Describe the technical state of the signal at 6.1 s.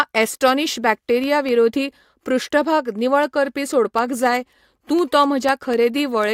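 At 6.1 s you're still inside periodic USB or driver dropouts running from 0.23 to 6.24 s: every 0.25 s a tiny sliver of audio goes silent, ticking over the speech.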